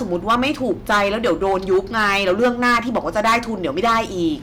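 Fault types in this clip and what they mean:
Hard clipping: the speech is driven about 14 dB past what the signal path can carry, so every peak is sliced off flat at the ceiling, and roughly one sample in fourteen sits pinned there. With overload this heavy, each loud syllable picks up a harsh, buzzy fuzz across the whole clip. On a waveform the peaks appear as flat plateaus; a spectrogram shows smeared harmonic energy reaching high up on every loud frame.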